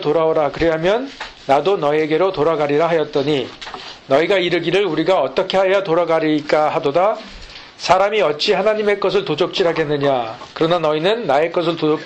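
Nothing in the audio stood out as a technical fault on listening.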